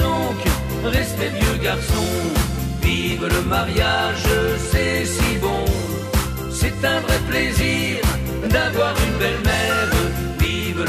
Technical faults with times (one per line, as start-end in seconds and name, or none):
0.98-10.61 clock drift buffer slips